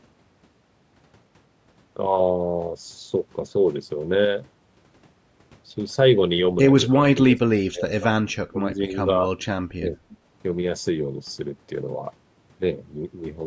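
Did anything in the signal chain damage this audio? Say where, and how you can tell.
Yes. Between 7.13 and 10.14 s the speech dips sharply in four bursts, at 7.13, 7.71, 8.23 and 9.79 s, by up to roughly 25 dB. This is likely speech suppressed in double talk by the call processing's echo canceller.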